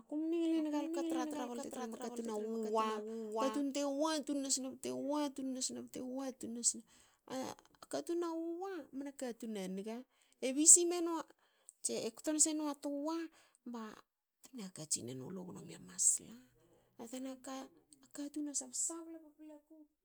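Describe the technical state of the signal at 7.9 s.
Around 7.9 s the speech signal runs intact, with nothing heard there to indicate a technical fault.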